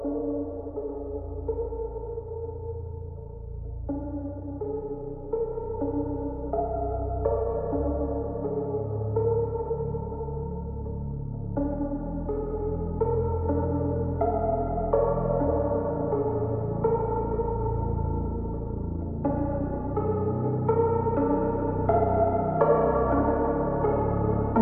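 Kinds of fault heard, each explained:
Wrong sample rate: the samples are clocked out slower than they were captured, with no rate conversion, so everything is stretched in time and lowered in pitch by the same ratio. Playback runs at about 0.726 of the correct speed and sits roughly 5.55 semitones flat for the whole clip, giving a sluggish, darkened sound throughout. That ratio fits 44.1 kHz material being played back at 32 kHz.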